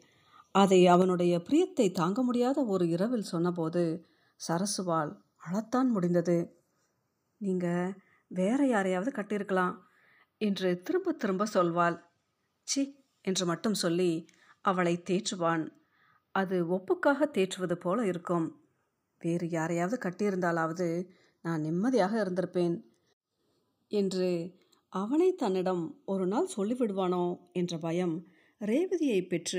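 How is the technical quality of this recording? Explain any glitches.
The recording has two technical faults: a slow drift between its two channels and two sudden level drops in the speech.

Channels drifting apart runs throughout. The two channels appear to run on separate clocks differing by about 20 parts per million, so their offset grows to roughly 0.4 milliseconds by the end. Summed to mono, comb-filter notches creep slowly across the spectrum, giving a slowly moving flanging colour.

Microphone volume stepped down occurs at 1.02 s and 6.75 s. Speech and background fall together in a single step, by about 5 dB at the first point and about 1 dB at the second. The likely cause is the call software reducing the microphone's input volume after judging it too loud.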